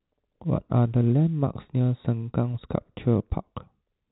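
No technical fault can be heard anywhere in the speech. It carries the band-limit of G.711 mu-law telephone coding, with nothing above about 3.9 kHz and at most a faint trace of coding noise riding under the voice.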